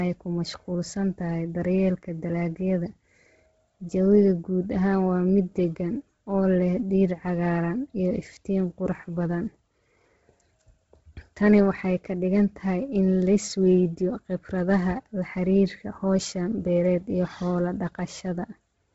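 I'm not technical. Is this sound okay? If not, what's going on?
No. Throughout the clip, the speech was most likely squeezed hard by Bluetooth LC3 compression, the codec wireless earbuds use. It discards the highest sounds, leaving nothing above 7.7 kHz, and fills gaps with noise, so voices sound muffled, breathy and grainy.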